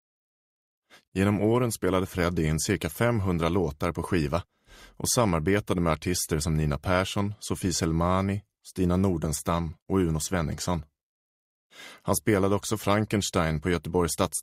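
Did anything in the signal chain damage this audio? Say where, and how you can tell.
No, nothing along the chain seems to have left a mark on this one, so there's no stage to point a finger at.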